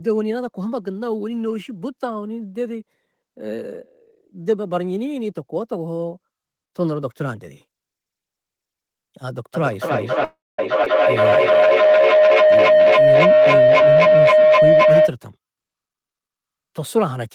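Speech recorded over a call, with several network and acoustic faults clustered in the second half. A feedback howl runs from 9.54 to 15.17 s: the loop between two devices in the same room gains level each pass, building a tone near 700 Hz that peaks about 10 dB above the speech and pulses roughly every 300 ms. A call audio freeze from 10.24 to 10.59 s stretches the last sound for 0.34 s, including about 0.22 s of silence, before resuming with nothing lost; this is likely packets arriving late and the jitter buffer running empty. A skip ahead at 10.84 to 10.87 s drops roughly 100 ms, joining both sides of the jump almost directly. A jitter buffer slow-down from 11.21 to 12.03 s repeats pitch periods to add 91 ms, so the speech runs at 90% speed with unchanged pitch. Jitter buffer speed-up follows twice, as the receiver trims pitch periods to cut excess delay: 13.67 to 14.86 s at 108% speed, removing about 100 ms, and 15.36 to 16.49 s at 111%, removing about 150 ms, both sounding hurried.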